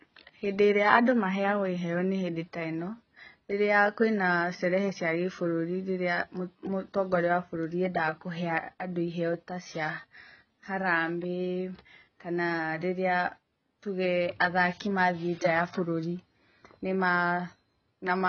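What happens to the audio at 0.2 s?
AAC compression damage is present at 0.2 s, as it is across the whole speech clip. The sound points to a low-bitrate AAC-LC encode, likely around 16 kbps. At that rate the encoder discards the upper spectrum entirely, so nothing is heard above about 6.5 kHz, and it quantises the remaining bands so coarsely that they smear. The speech comes across as dull and muffled, with a warbling, fizzy texture on sustained sounds and sibilants.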